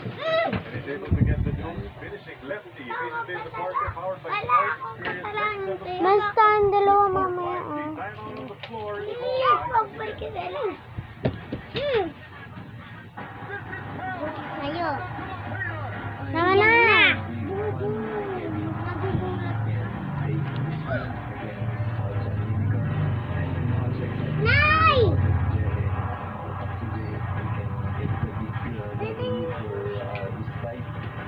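No technical faults are audible anywhere in the audio.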